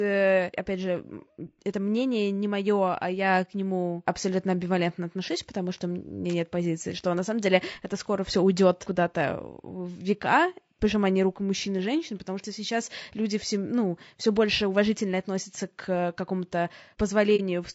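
Throughout, the speech sounds rough and grainy, with noise filling the gaps between harmonics and a thin top band; likely low-delay AAC compression at a rate that fits about 32 kbps. From 17.36 to 17.41 s the sound fades softly into a brief dip and back, AAC frame loss with muting, consistent with a single lost frame that the decoder silenced.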